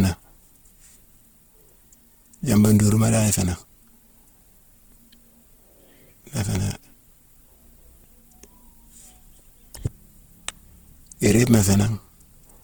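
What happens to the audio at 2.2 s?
At 2.2 s, as throughout, the speech is likely under Opus compression in its music-style CELT mode, consistent with about 16 kbps, filling starved bands with folded or noise content. The speech sounds plainly rough and grainy, though bandwidth stays full.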